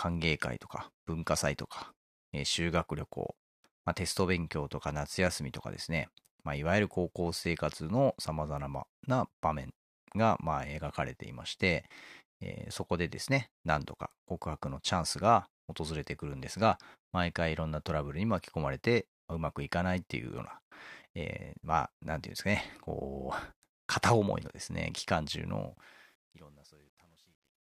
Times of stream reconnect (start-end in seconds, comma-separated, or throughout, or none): none